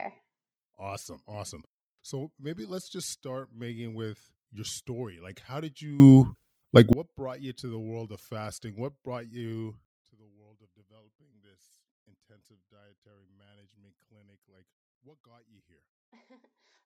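Digital gain, likely switched without a ramp, causes a sudden gain jump: speech and background noise leap about 24 dB from 6.0 to 6.93 s, then drop about 24 dB from 9.85 s onward.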